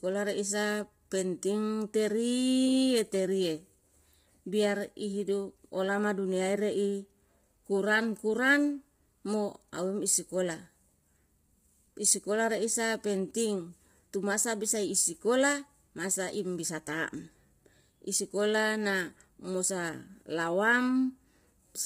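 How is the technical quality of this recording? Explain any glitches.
The speech has heavy compression damage. All the way through, it sounds rough and grainy, with noise between the harmonics and nothing above 15.7 kHz, likely from low-delay AAC compression at a heavily starved bitrate, around 24 kbps.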